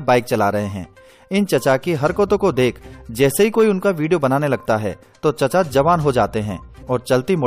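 Damaged data in a compressed stream at 6.82 s: corrupted bytes make the decoder misread a frame and resynchronise, producing a brief, sharp blip in the sound.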